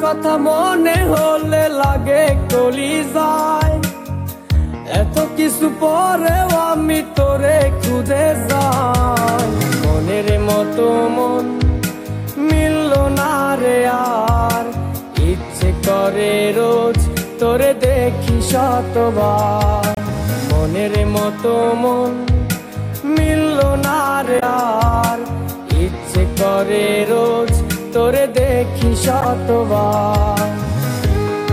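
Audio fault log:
19.95–19.98 s, 24.36–24.43 s and 29.21–29.25 s: damaged data in a compressed stream. Corrupted bytes in the encoded data stop the decoder from reading those frames, so it loses sync and searches for the next frame header. Each 36, 69 and 44 ms lapse sounds like a short chirp or blip.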